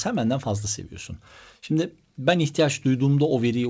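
There are no technical faults to describe in this speech clip, which comes through a call codec path that carries nothing above 8 kHz.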